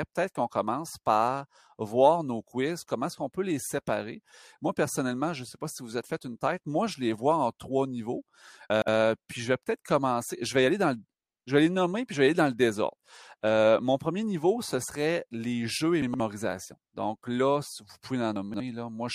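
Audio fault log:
8.70–8.88 s, 16.02–16.20 s, 18.36–18.60 s: chunks out of order. After "vois en trois niveaux", after "serait les jeux et" and after "là vous", a 60 ms chunk plays two, two and three chunks late. It sounds jumbled, with hard joins. Unlike a dropout, no audio goes missing.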